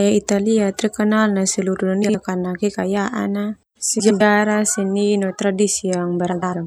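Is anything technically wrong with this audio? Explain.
Yes. Frames out of order occurs at 2.03–2.15 s, 3.99–4.21 s and 6.32–6.54 s: adjacent blocks of about 52 ms, then 105 ms, play swapped, giving brief garbled flutter.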